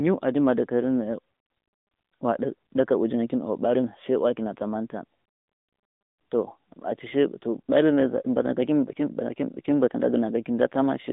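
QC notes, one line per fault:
Throughout: AMR narrowband mobile codec. The speech is confined to a telephone band of roughly 200 Hz to 3.7 kHz, with nothing above 3.8 kHz, so sibilants and breath detail are gone and the voice sounds boxed in. Codec damage is plainly audible: the vocal-tract model excited by sparse pulses gives a buzzy, synthetic edge. This degree of artefact fits a mid-rate mode of about 10 kbps rather than the top rate.
Throughout: sample clock jitter. A faint hiss-like roughness rides on the speech, about 55 dB below the signal, and disappears in the pauses. The converter clock wanders by something on the order of half a microsecond, so each sample is taken slightly off time. The resulting error scales with how fast the waveform is changing, which makes it most noticeable on louder, brighter passages and absent when nothing is sounding.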